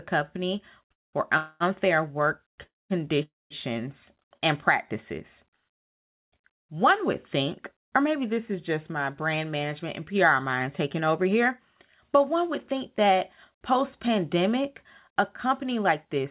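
Call audio freeze interrupts this speech recording four times: 0.92–1.16 s, 1.37–1.63 s (right after "company for"), 2.63–2.93 s and 3.23–3.53 s. Each freeze inserts 0.21 to 0.28 s of filler. The last sound is drawn out as a fading buzz, which falls to about 0.2 s of silence in the first, third and fourth freezes. The second stays almost entirely buzz. The talker then resumes exactly where they stopped, with nothing lost. The likely cause is packets held up in transit, which left the jitter buffer empty until they arrived. A short stall from a late packet follows at 4.37–4.44 s, just before "and practices". A sound is held about 38 ms too long with a slight buzzy dip while the receiver waits for one overdue packet, and then the speech continues without any gap in content. Jitter buffer speed-up runs from 15.1 to 16.25 s, after "think that post pandemic". Here the delivery is about 5% faster at unchanged pitch and sounds slightly hurried. 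The receiver trimmed tiny pitch-period slices, totalling somewhere around 70 ms, to shed delay that had built up in the buffer. Throughout, the band stops at 4 kHz with telephone-style coding noise, which points to a G.711 mu-law call path at 64 kbps.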